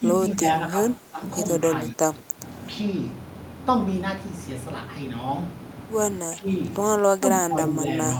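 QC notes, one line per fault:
0.00–0.06, 0.35–0.41, 0.69–0.77, 0.99–1.21, 1.92–2.03, 2.22–2.41, 6.21–6.49, 7.17–7.76 s, speech suppressed in double talk: brief dips of roughly 5 to 15 dB, deepest near 1.92 s. The likely cause is an echo canceller ducking the talker while the far side spoke.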